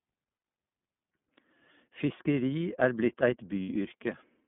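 iLBC codec damage runs through the whole speech clip. The sound is confined to a telephone band of roughly 150 Hz to 3.5 kHz, with nothing above it. Each frame's excitation is coded on its own at a low rate, which leaves the speech plainly rough and slightly synthetic. The character fits iLBC's 30 ms frame mode at about 13.33 kbps.

Lost iLBC frames appear first from 0.35 to 0.44 s, a 90 ms gap that fits three missing 30 ms frames. The decoder fills it by repeating the last pitch cycle blended with noise, so the gap sounds like a held, faintly buzzy vowel. A second loss from 3.63 to 3.69 s lasts 60 ms, fitting two frames, and has the same concealed, sustained quality. Because iLBC frames are independent, the speech recovers almost immediately after each gap.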